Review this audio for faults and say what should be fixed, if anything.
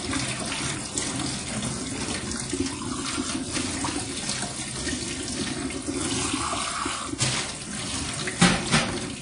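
Throughout the clip the sound rings and smears, with a washy hiss that breathes with the signal and nothing above 10.1 kHz. The likely cause is WMA compression at a low bitrate, near 32 kbps by the damage, spreading quantisation noise across long blocks and zeroing weak components. Keep a lossless or high-bitrate source and avoid low-bitrate WMA encoding.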